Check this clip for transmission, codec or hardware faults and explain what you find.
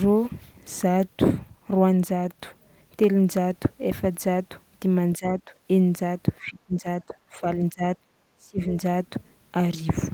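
Speech suppressed in double talk is present. At 5.18–5.51, 6.41–6.86, 7.06–7.45, 7.72–7.97 and 8.37–8.74 s, the speech dips by roughly 10 to 25 dB, deepening toward the end. This is likely an echo canceller mistaking the talker for echo while the far side speaks.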